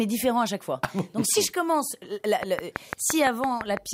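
From 2.43 s right to the end there's a train of clicks: around ten near-identical pops at a steady six per second, sitting well above the sound, roughly 15 dB hotter. It's likely interference from nearby equipment or a faulty connection or power supply.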